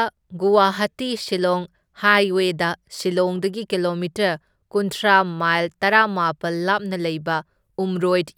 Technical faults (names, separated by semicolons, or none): none